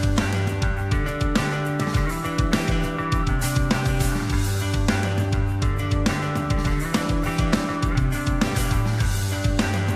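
From 1.64 s to 3.64 s a USB whine sits under the audio: a fixed-pitch tone built on 1 kHz, with its strongest component at 5 kHz, roughly 45 dB below the signal. Current drawn in the bus's 1 ms frames has leaked in through power or ground. Mains hum sits on 50 or 60 Hz and its multiples, whereas this whine sits on a 1 kHz grid with a bright upper harmonic.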